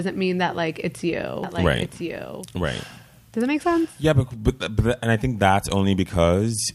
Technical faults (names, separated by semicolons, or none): doubled audio track